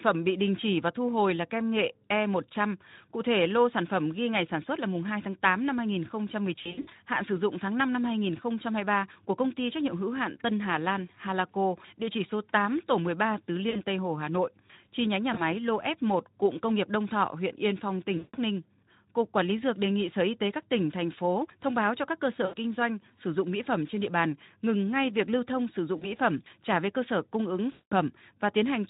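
VoIP packet loss concealed by the speech codec breaks up this speech at 6.55–6.93 s (just before "hạn sử dụng tháng"), 13.69 s, 15.33 s, 18.17 s, 22.45 s, 25.97 s (between "việc lưu thông sử" and "phẩm trả về cơ") and 27.71 s (after "cơ sở cung ứng"). The decoder stretches the last pitch into a buzzy tone or coloured noise that fades, while the Speex coding adds only light roughness. Recovery sounds weak afterward.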